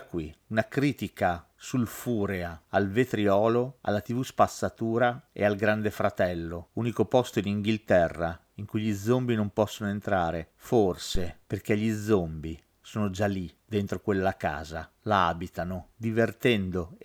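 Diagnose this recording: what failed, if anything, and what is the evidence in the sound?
The failure sits in the analogue input stage: a phantom power thump at 11.15 s, lasting until about 11.35 s. It is a deep, low-frequency thud in the speech recording, peaking at about -16 dBFS, and it dies away with a decay of about 46 ms. Switching the mic supply on or off on a live input sent a DC step through the coupling capacitors, which the preamp passed as a single transient.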